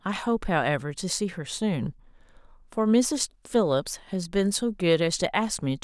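Nothing in the speech recording stood out as a technical problem on listening.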